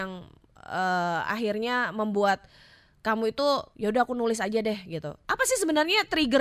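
Nothing technical goes wrong anywhere in this speech recording, so there's no fault to point to at any moment along the way.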